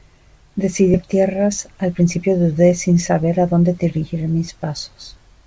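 At 0.94 to 1.05 s a skip ahead drops about half a second of speech; playback jumps forward, splicing both sides almost directly. From 1.48 to 2.27 s, a jitter buffer speed-up trims short pitch-period pieces, around 50 ms in total, so speech runs about 6% faster at unchanged pitch, over the G.722 path's 8 kHz band limit.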